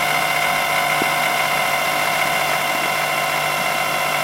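Two loud pops sit on top of the sound, one at 1.02 to 1.04 s and a double one at 2.75 to 2.88 s, peaking roughly 10 dB above it, likely from a voltage pulse such as a plug, switch or static discharge. The sound continues underneath rather than dropping out.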